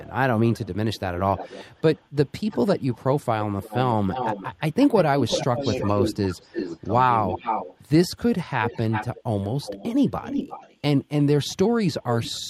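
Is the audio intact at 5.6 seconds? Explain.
No. Two faults overlap at 5.6 seconds. An echo leak runs from the start to 7.78 s: a delayed copy of the speech comes back about 330 ms late and roughly 10 dB below it. The likely cause is a loudspeaker on the far end whose echo canceller left residue in the microphone signal. The fixed 330 ms lag of the copy sets it apart from room reverberation, which would smear continuously rather than repeat at one delay.

Inside that span, speech suppressed in double talk affects 5.45 to 6.59 s. The speech dips in short pieces, about 400 ms in total, falling by as much as roughly 15 dB while the other side is also talking. This is likely the echo canceller turning everything down when it cannot separate the near talker from the returning echo. Because the dips track the overlap of two talkers, it reads as suppression rather than packet loss, which would leave gaps unrelated to who is speaking.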